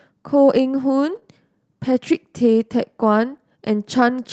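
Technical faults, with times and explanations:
1.11–1.17 s and 3.33–3.35 s: lost packet rebuilt from error correction. About 40 ms, then 20 ms, get rougher and noisier because the decoder played the lower-quality backup copy carried in the next packet.
1.19–1.23 s and 3.37–3.41 s: short concealed packet loss. Roughly 20 ms gaps were filled by extending the preceding sound, giving a brief smear or wobble just after each rebuilt stretch.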